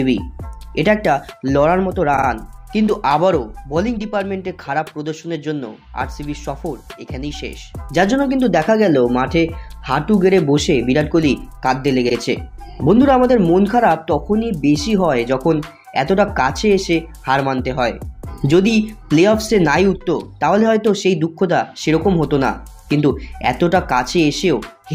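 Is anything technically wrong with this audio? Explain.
Yes. Two brief stutters occur where repeated frames play. At 2.16 s a short slice of about 52 ms sounds three times in a row, and at 12.08 s one repeats once. A block of compressed frames was sent again, adding about 0.16 s overall.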